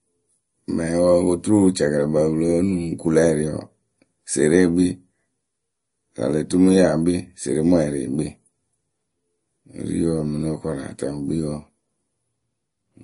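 Throughout the speech, the sound is plainly damaged by coding, with nothing above 10.6 kHz. This is likely MP3 compression at a low bitrate, around 40 kbps. Starved of bits, the encoder drops weak frequency lines that flicker between frames and cuts the treble, giving a watery, swirly texture.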